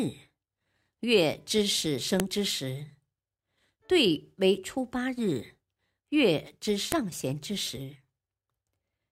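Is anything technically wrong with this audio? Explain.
Yes. At 2.20 s and 6.92 s, file header played as audio: separately saved WAV segments were joined with each segment's header bytes left in. Those bytes are read as sample values, so each join produces a sharp, loud click in the speech.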